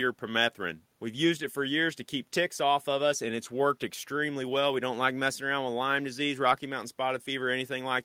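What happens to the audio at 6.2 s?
Nothing goes wrong at 6.2 s: the speech continues there without any audible dropout, click, distortion or other fault.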